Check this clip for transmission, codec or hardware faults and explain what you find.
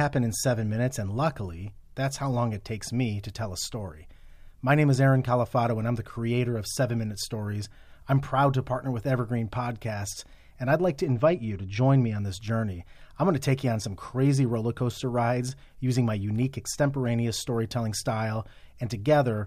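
One fault: channel delay (comb filtering) from 11.04 to 12.18 s. One channel runs roughly two samples late, about 0.05 ms, and the mono sum cancels at evenly spaced frequencies, the first notch near 10 kHz. The speech turns dull, losing top-end air.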